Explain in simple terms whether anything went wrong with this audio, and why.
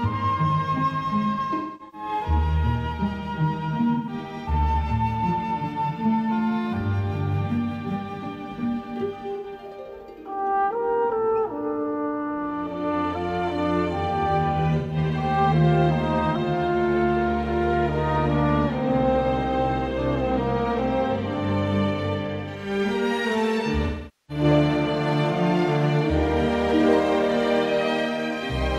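AAC frame loss with concealment occurs at 1.33–2.08 s, 3.94–4.13 s, 9.36–9.46 s, 14.78–14.96 s and 23.86–24.44 s. Chunks of the compressed stream went missing, and the decoder covered each gap by reusing and roughly reshaping the last good sound. Short gaps, about 0.1 s, sound briefly smeared or hissy. The first and last are longer: the first spreads over about 0.6 s, with one gap near a third of a second, so the sound thins and dips before returning.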